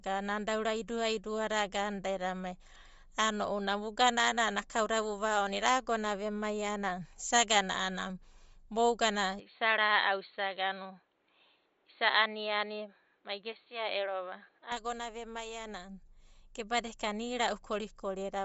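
From the start, the speech has a plainly audible breathy, grainy edge, and nothing is present above 7.7 kHz. This points to Bluetooth LC3 compression, likely at around 32 kbps with 10 ms frames. At that rate the codec discards much of the upper spectrum and substitutes synthetic noise, which gives the speech its rough, hissy texture. The band limit caps the top end.

From 9.40 s to 14.72 s the band narrows further, with nothing above 4.4 kHz. The speech turns duller and boxier without any gap at either transition, and the level stays about the same. A faint new noise floor, well below the speech, comes in during this stretch. This fits an input switched to a poorer device, likely a different microphone or a headset call profile, before the original input returns at 14.72 s.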